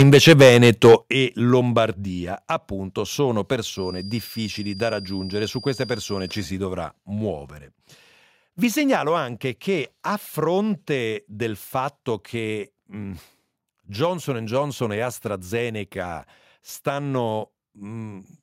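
Speech, opening with microphone overload from 0 to 0.95 s. Peaks sit about 7 dB past the limit, flattening roughly a tenth of samples. The likely cause is excessive input gain. Microphone volume stepped down at 0.03 s (about 3 dB), 1.02 s (about 9 dB), 2.04 s (about 3 dB, just before "appunto sono") and 9.09 s (about 2 dB, before "anche che a fronte"). These are likely automatic gain cuts by call software. A feedback whistle at 4.8 kHz runs from 3.69 to 6.56 s, between "appunto sono" and "dovrà muovere", about 20 dB below the speech. A speaker-to-microphone loop near instability is the likely cause.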